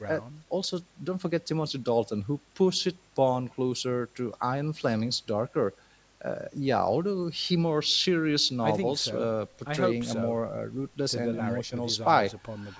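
No technical faults turn up anywhere in the speech, which carries the ordinary signature of a call's microphone processing: the lowest bass is filtered away and nothing extends above 8 kHz.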